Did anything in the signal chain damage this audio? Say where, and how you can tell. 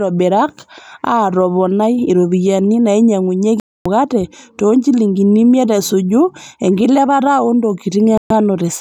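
Yes. Reception dropped out twice: a digital broadcast dropout mutes the speech from 3.60 to 3.86 s and again from 8.18 to 8.31 s. The receiver silenced output when frames failed, and the gap lengths fit whole lost 32 ms frames. That audio is gone.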